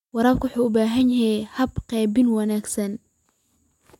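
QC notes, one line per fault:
1.01–3.91 s, clock drift buffer slips: regular clicks about every 0.97 s, likely from two mismatched clocks (around 150 ppm apart) dropping or repeating a few samples.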